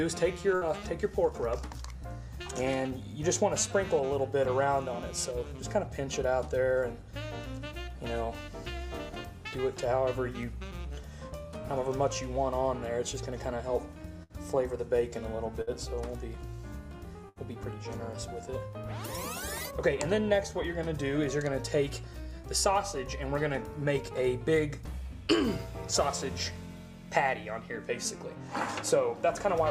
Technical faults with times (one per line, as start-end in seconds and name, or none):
0.55-0.64 burst of packet loss
14.23-14.32 burst of packet loss
15.61-15.70 burst of packet loss
17.29-17.39 burst of packet loss